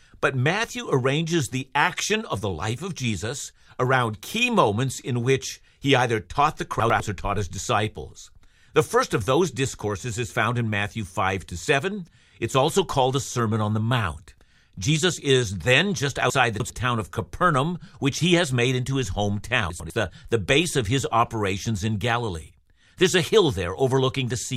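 Chunks out of order in this speech clip at 6.8–7.0 s, 16.3–16.7 s and 19.7–19.9 s: a 100 ms chunk plays after its successor (three chunks late at 16.3 s), jumbling the sound with three hard joins each.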